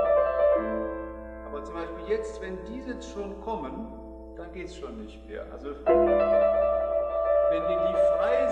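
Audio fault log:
Nothing here to log; I listened all the way along and didn't catch a single problem worth noting.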